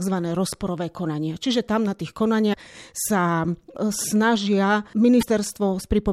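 Damaged data in a compressed stream breaks into this speech clip twice, from 2.50 to 2.54 s and again from 5.19 to 5.23 s, each a short blip of roughly 45 ms. At both points, corrupted bytes in the encoded stream leave the decoder unable to read the affected frames correctly. It loses sync and has to hunt for the next valid frame header, and that recovery is heard as a brief glitch cutting across the speech.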